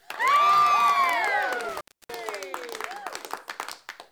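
From 1.69 to 2.15 s there's an intermittent contact, a loose connection briefly opening: the sound drops out for about 289 ms, with crackle at both edges and faint hiss between.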